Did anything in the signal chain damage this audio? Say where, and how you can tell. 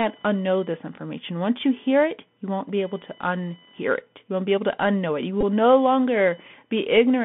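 Yes. Three faults are audible, at three different stages.

The first is computer activity noise in the analogue wiring. A faint buzz, close to 1 kHz and roughly 30 dB below the speech, runs through the whole clip. It comes from processor or peripheral load currents moving the shared ground under the audio circuit. It is not mains hum: the pitch sits far above 50 or 60 Hz, and its chirpy, scratchy texture follows machine activity rather than the speech.

The second is the Bluetooth CVSD headset codec, which shapes the entire clip. Nothing passes below about 150 Hz or above 3.5 kHz. A granular hiss lies under the speech, s sounds turn scratchy, and loud bright moments smear where the adaptive one-bit step cannot keep up. That matches a 64 kbit/s delta-modulated stream. A plain narrowband call codec would be band-limited too, but it would lack this grainy floor and slope-overload roughness.

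The third is a Bluetooth headset packet repeated, on the radio link between headset and host. From 5.41 to 5.43 s, about 19 ms of audio turns into a short, rough buzz near 267 Hz. That fits roughly five lost 3.75 ms packets, each replaced by decoding the previous packet's bits again. A network dropout would leave silence or a smooth concealment fade. Here the tone is periodic, which points to repeated packets.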